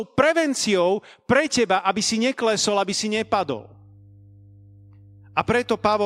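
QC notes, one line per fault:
3.16–6.06 s mains hum: a ground loop or nearby transformer couples the 50 Hz power line into the path, adding a steady low tone roughly 25 dB under the speech.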